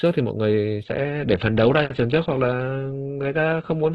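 At 0.84 s the speech switches abruptly to an adaptive stream at a lower bitrate and stays there to the end. The connection slowed, so the player dropped to a cheaper encoding: nothing above 8.2 kHz survives, and the sound turns thin, which points to a drop from about 64 to about 12 kbit/s. Unlike a dropout there is no gap, and unlike a plain low-pass filter the change brings coding artefacts.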